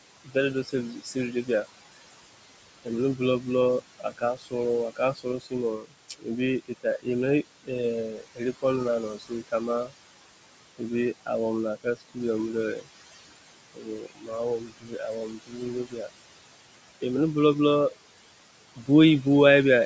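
Throughout the speech you get noise suppressor artifacts. The suppressor pushes whatever it takes for steady room noise down by about 21 dB. That noise sits only about 12 dB under the speech, so the background sinks between phrases and swells back underneath them.

On top of that there's speech cut by the noise suppressor at 0.24–1.66, 2.84–7.07, 7.63–9.92, 10.78–12.17, 12.76–12.88, 13.55–16.13 and 18.76–19.26 s. In those spans it treats quieter bits of speech as noise and ducks them by up to about 21 dB, so soft endings sound swallowed. It's worst at 13.55–16.13 s, where roughly a second and a half turns faint.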